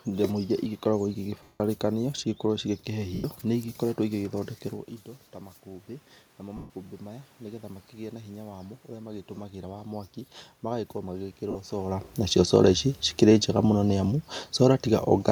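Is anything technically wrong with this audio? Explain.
Yes, there are two problems.

Lost LE Audio frames at 1.43 to 1.60 s, 3.15 to 3.24 s, 6.57 to 6.70 s and 11.51 to 11.55 s, gaps of 170, 90, 130 and 40 ms. The LC3 decoder fills each gap by repeating the last spectrum with scrambled phase, so the speech briefly smears into noise before fading.

Automatic gain rising from 5.31 to 10.2 s. The input dropped by about 15 dB, and the gain control crept up by about 9 dB to compensate, so voice and room noise swell together over several seconds. The level shifts around 4.5 and 11.5 s are just the talker moving.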